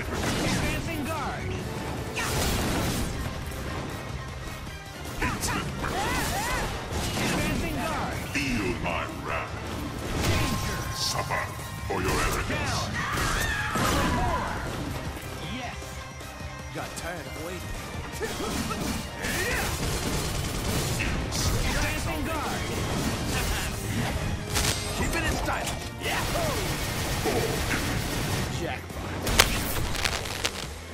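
Cable scratch noise breaks in at 24.50 to 24.72 s, then at 29.38 to 30.67 s. Dense, uneven scratching sits roughly level with the sound. A worn connector being moved is the likely cause.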